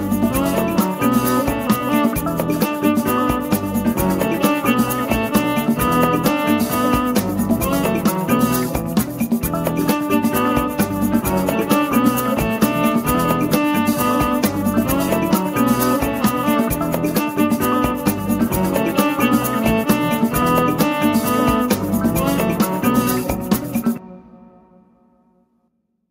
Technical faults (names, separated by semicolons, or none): none